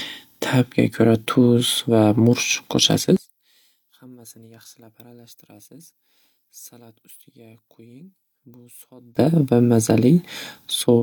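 From 3.17 to 9.17 s the speech collapses by about 27 dB to a faint residue, likely one channel inverted cancelling in mono; unlike a dropout, traces remain.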